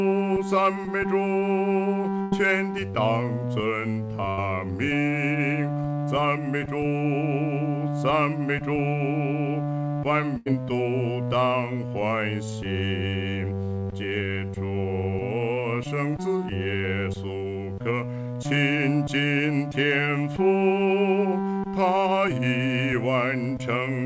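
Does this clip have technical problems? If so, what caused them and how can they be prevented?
Yes. A burst of packet loss occurs three times: 2.22–2.34 s, 4.30–4.40 s and 10.38–10.48 s. Each time the receiver stretches and fades the last sound across the gap, then resumes later, skipping about 100 ms, 80 ms and 80 ms. A plain dropout goes silent, but here the gap is filled with a fading hold and the audio picks up further on. Forward error correction, or a deeper jitter buffer on the call, would prevent it.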